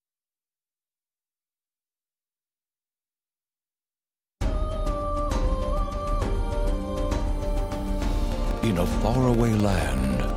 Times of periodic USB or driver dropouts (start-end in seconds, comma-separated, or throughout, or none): 8.25-10.30